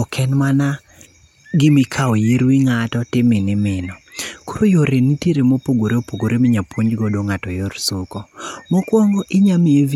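No technical faults can be heard anywhere in the speech recording, and the signal holds steady throughout.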